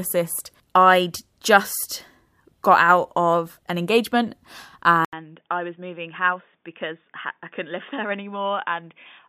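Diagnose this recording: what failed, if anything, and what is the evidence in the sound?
At 5.05 s the speech drops out for 80 ms, then returns about 10 dB quieter, with nothing above 3.6 kHz and a faint new noise floor well below the speech. This continues to the end of the clip. The stage is the capture device selection: the likely cause is the input switched to a poorer device, such as a headset's narrowband call profile, which imposes its own band limit, gain and background noise.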